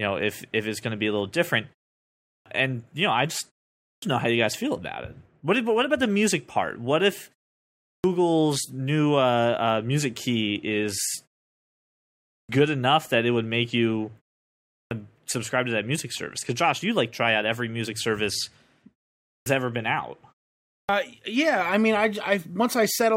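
At 2.27, 3.83, 7.84, 12.29, 14.71, 19.26 and 20.7 s you get a clipped start after a pause: each time the speech picks up after a gap of roughly 0.4 to 1.1 s, the output device has dropped into sleep and takes about 190 to 200 ms to wake back up. That first fifth of a second is simply swallowed, so the speech lurches in abruptly from silence, missing its opening sounds, while the pauses themselves go cleanly quiet.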